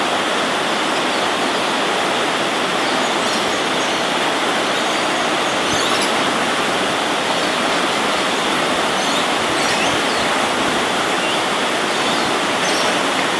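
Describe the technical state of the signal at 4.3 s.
At 4.3 s the signal is intact, with no dropout, distortion, glitch or other fault audible at that moment.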